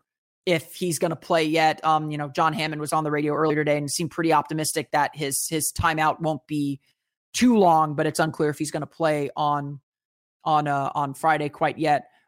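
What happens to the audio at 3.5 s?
Damaged data in the compressed stream runs from 3.46 to 3.51 s, lasting about 44 ms, between "was on the radio" and "today and seemed pretty". At that point part of the encoded stream is corrupt, so the decoder either misreads or refuses those frames and loses sync until it finds the next valid frame header. What comes out is a brief disruption that falls somewhere among a chirp, a squawk, a click and a short hole.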